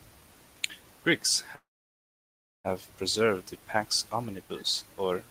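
From 1.55 to 2.67 s the speech halts into a brief tail, then about a second of silence before resuming: a call audio freeze, likely from delayed packets.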